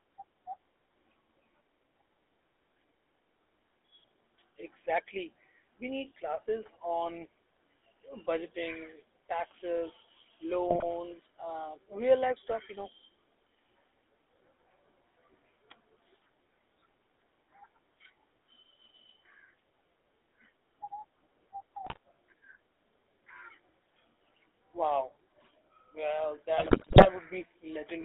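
The whole recording has passed through the GSM full-rate codec, which rebuilds speech from a vocal-tract filter driven by sparse, regularly spaced pulses rather than from the original waveform. Because so much detail is discarded, which fits a coder running at about 13 kbps, the voice comes out plainly buzzy and gravelly. The line band, roughly 300 Hz to 3.6 kHz, strips away low warmth and upper sibilance, leaving a thin, boxy telephone tone.

GSM bit errors strike three times as corrupted bits reach the decoder and scramble its filter, pitch and gain values. From 10.68 to 10.84 s, just before "and real life stuff", the speech breaks into squawks and pops; the damage fits about seven 20 ms frames. A shorter burst at 21.84 to 21.97 s, fitting about six frames, garbles the sound again. The longest, 26.58 to 27.07 s, spans about 22 frames and is the densest, with the sound dissolving into gargling and level jumps.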